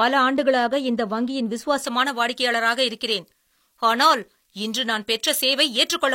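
Pre-emphasis left on from 1.84 s to the end of the speech, right after "ஆண்டுகளாக இந்த வங்கியின்". The treble lift applied before recording or transmission was never undone by the matching de-emphasis on playback, so the upper band stays raised: at 10 kHz it sits about 11 dB above its level at 1 kHz, a tilt that fits the J.17 curve. The speech turns thin and over-bright, with sibilants hissing and edgy.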